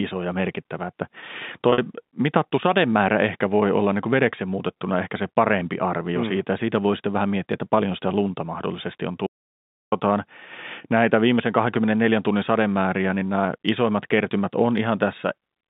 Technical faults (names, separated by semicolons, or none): packet loss with pitch repetition; audio dropout to silence